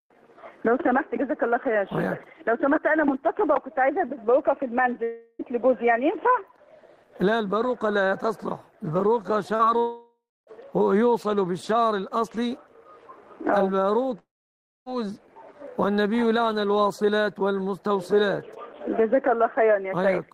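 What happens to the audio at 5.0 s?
From 5.03 to 5.42 s, the sound breaks into a buzzy, hissing continuation of the last moment, fading without full silence. This is a long network dropout, likely. No audio arrived for about 0.36 s, so the receiver padded the gap. Playback then resumes without the lost part.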